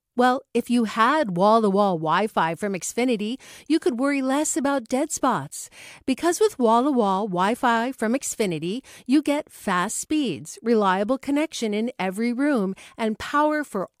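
Nothing stood out on listening to this recording.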